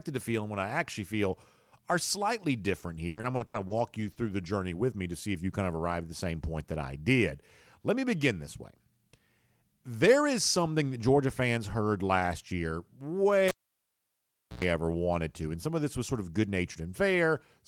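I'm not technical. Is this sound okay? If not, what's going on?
No. From 3.07 to 4.48 s, between "feel are slightly different" and "with me to see", the sound turns choppy and robotic. That's repeated packet loss: six chunks of the signal went missing, the longest a tenth of a second, and each hole was papered over by stretching the sound just before it.

At 13.48 s there's a pop, then about 1.1 seconds of near silence, a brief hum, and another pop as sound returns at 14.64 s, just before "ever wanted to". That's a cable pulled and plugged in; the hum is 60 Hz mains buzz picked up while the plug was half-seated.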